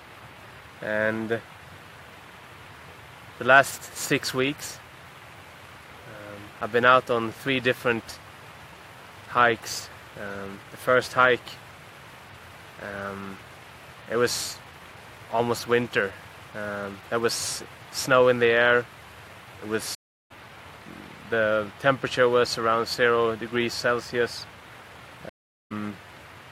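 At 19.95 s the audio drops out for about 0.35 s and returns at 20.32 s, and at 25.29 s it goes silent again for about 0.41 s until 25.73 s. Each time it picks up around 0.4 s further on, so a short stretch is skipped rather than delayed. This is a stream reconnect: the connection broke, the player fell silent, then rejoined the live stream with a fresh decoder whose first frame fades in.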